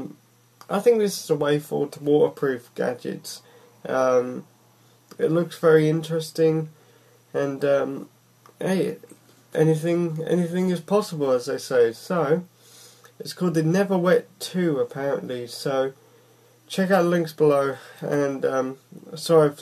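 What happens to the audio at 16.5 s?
Nothing goes wrong at 16.5 s; the audio carries on intact through that moment without any audible fault.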